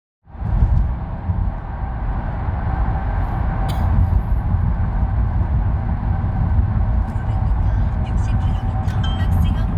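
No technical faults are audible; the smooth fade-in over the first 0.68 s rises evenly with no click or hard edge.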